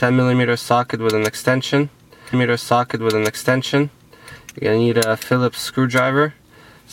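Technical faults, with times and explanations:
2.32 to 4.33 s, stream segment repeated: at 2.32 s the audio jumps back with a blip and replays a stretch of about 2.0 s of the programme that was already heard, so the section up to 4.33 s is a duplicate and the clip runs that much longer. This happens when the player fetches or queues the same stream segment twice and plays both copies in sequence. The blip comes from the abrupt join where playback skips back.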